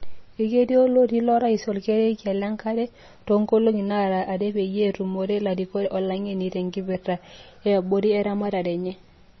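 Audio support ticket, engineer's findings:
Likely MP3 compression at a low bitrate, consistent with about 24 kbps. The starved encoder lowpasses and zeroes weak frequency lines frame to frame. Throughout the speech: nothing above 5.9 kHz, watery swirling, metallic chirps on s sounds, smeared onsets. Heavy damage.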